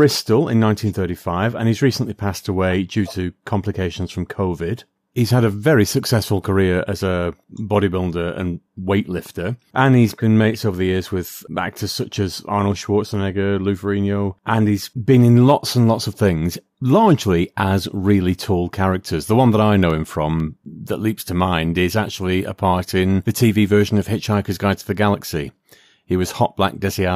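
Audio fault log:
19.90–21.40 s, periodic USB or driver dropouts: evenly spaced ticks every 0.25 s after "one that I", each a tiny silent gap left when the USB bus or audio driver stalled.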